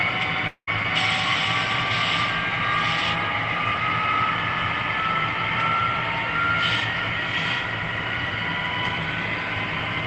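Long network dropout, 0.47 to 0.69 s, likely: about 200 ms of audio never arrives. The receiver drags the last sound out as a buzz that fades away, leaves about 70 ms of silence, then resumes with that stretch gone.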